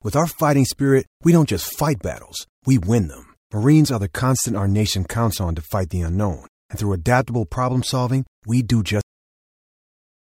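At 9.01 s, right after "problem solving we do", the speech ends in a cut-off end: the final buffers were never written, so the sound stops mid-syllable with no decay. The waveform drops abruptly to a flat line, and the spectrogram goes blank until the clip ends.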